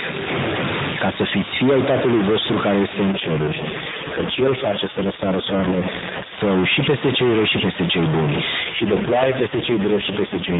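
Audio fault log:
Throughout: stuck bit. A distortion rides on all of the speech, and the pauses, which should be quiet, are filled with a steady hiss of noise. This is likely one data bit held at a fixed value by a broken line or converter. Roughly half the samples are then off by that bit's weight in a pattern that follows the waveform, and the bit flips with the sign of small values, so the pauses fill with noise.
3.12–6.40 s and 8.64–10.60 s: AMR rate drop. In both stretches the speech turns rougher and more synthetic, with no gap and no change of bandwidth. It stays capped near 4 kHz like the surrounding AMR-NB audio. The network has pushed the codec down to a lower mode and is spending the freed bits on error protection, so fewer pulses describe each 5 ms subframe. The sound fits a fall from 12.2 to 4.75 kbps. The second drop lasts to the end of the clip.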